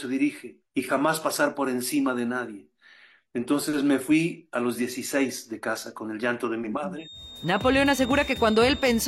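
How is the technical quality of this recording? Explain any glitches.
The recording has one fault near the end. A feedback whistle runs from 6.92 s to 9.08 s, likely a loudspeaker-to-microphone loop held just below runaway, sustaining a thin 3.7 kHz tone about 15 dB under the sound, swelling and fading slowly in level.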